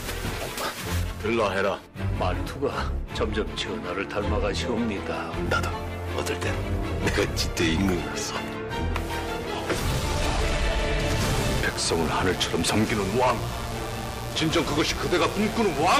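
From 11.31 s to the end of the recording at 15.99 s, a steady, raspy mains buzz sits under the audio, quieter than the main sound but clearly audible, roughly 15 dB down. Its coarse, edgy texture comes from sharp current spikes, repeating twice per cycle of the 60 Hz supply, that leak into the signal path through a dimmer, a rectifier or a missing shield, spreading harmonics of 60 Hz well up into the kilohertz range.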